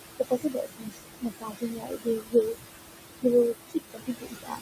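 From the start there are noise suppressor artifacts: the room noise, sitting only about 7 dB below the speech, gets pulled down by about 20 dB between phrases, leaving a pumping floor. From 0.19 to 2.35 s, and again from 3.54 s to the end at 4.61 s, there's speech cut by the noise suppressor. It mistook quieter parts of the speech for noise and dropped them by up to about 21 dB, so roughly a second and a half of the first stretch and most of a second of the second sound swallowed and faint.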